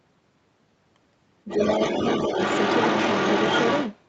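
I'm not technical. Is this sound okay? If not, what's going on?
No. From about 1.48 to 3.95 s there is other side's voice leaking through. The likely cause is that the talker's device played the far end of the call on its loudspeaker, and the echo canceller, the part meant to scrub that sound out of the microphone, missed it. So a second voice sits in the recording for over two seconds, roughly as loud as the main talker.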